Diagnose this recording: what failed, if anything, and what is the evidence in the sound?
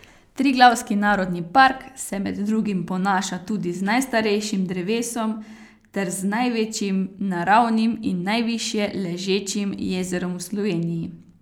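Nothing in this recording points to a failure at any stage of the chain, from capture and conversion through transport to playback, and the signal arrives intact.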